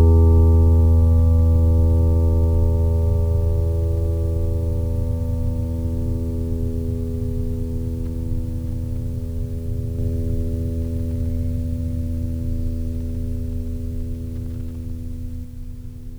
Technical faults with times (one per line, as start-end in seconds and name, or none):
9.99-15.45 doubled audio track